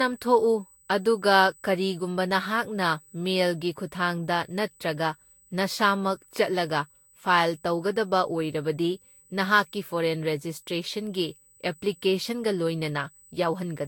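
From the first second to the end of the speech there's a thin, steady whine pinned at 8 kHz, sitting roughly 30 dB under the voice. That's USB whine. The bus works in 125 microsecond microframes, and that 8 kHz rhythm is getting into the audio through the power or ground. Its pitch never drifts, so it isn't acoustic. It's electrical noise riding along with the signal.

Also running the whole length, the speech has a swirly, hollow, smeared quality, and consonant attacks come out soft and blurry. There's nothing at all above 18.9 kHz. The damage is heavier than a single lossy pass would cause, and the texture points to Vorbis at around 60 kbit/s. The likely cause is generation loss: the audio was decoded and re-encoded about five times. Each pass quantised on a shifted frame grid, so the artefacts stacked up.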